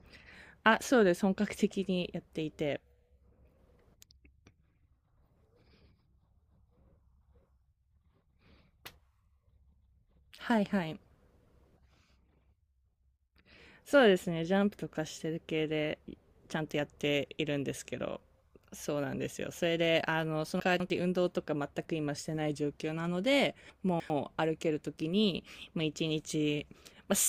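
At 20.6 to 20.9 s and again at 23.7 to 24.1 s the speech jumbles briefly: chunks out of order. A 100 ms chunk plays two, then three chunks late, so nothing is lost, but each spot leaves three hard joins.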